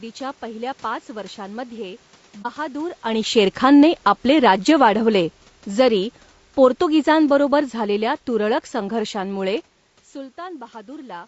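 A speech clip carrying plainly audible low-delay AAC compression throughout: the voice sounds rough and grainy, with noise filling the gaps between harmonics and a thin, synthetic-sounding top band, most likely from AAC-ELD at a low bitrate, around 32 kbps. On a spectrogram the harmonic lines look smeared and the upper band is patchy. Just after "पहिल्या पाच वर्षांमध्ये", from 2.42 to 2.46 s, AAC frame loss with muting leaves a brief dip of about 30 ms, fitting a single lost frame. It shows as a brief full-band vertical gap in the spectrogram and a tapered dip to silence in the waveform. From 3.43 to 9.63 s the automatic gain is falling, easing the level down by about 8 dB. Voice and room noise sink together, so the waveform envelope narrows steadily, separate from the talker's own movements near 2.5 and 9.5 s.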